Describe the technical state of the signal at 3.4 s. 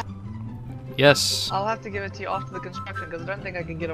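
At 3.4 s the signal is intact, with no fault audible at that moment.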